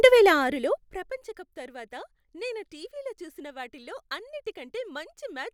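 From 0.3 to 1.22 s, zipper noise rides on the speech as its level drops by around 20 dB in coarse steps, roughly fifty per second, rather than a smooth ramp. Each step leaves a tiny click, so the fall sounds like a ticking zip. A waveform shows a staircase envelope, and a spectrogram shows faint, evenly spaced vertical lines across that span.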